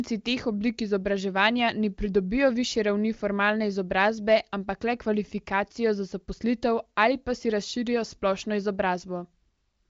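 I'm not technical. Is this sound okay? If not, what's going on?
Yes, no faults: this is speech carried over an HD Voice phone link (the AMR wideband codec), which keeps nothing above about 7.4 kHz, so the very top end is a little duller than a studio recording.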